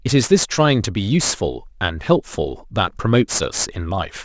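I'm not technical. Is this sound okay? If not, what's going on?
No. The recording was converted from 24 kHz down to 16 kHz without first removing the high sounds the new rate can't hold, causing aliasing. Anything above 8 kHz folds back as false tones, so s and sh sounds come out gritty and metallic throughout the speech.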